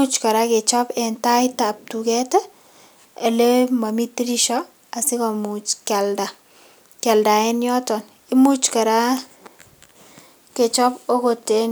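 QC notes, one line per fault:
Nothing stood out on listening to this speech recording.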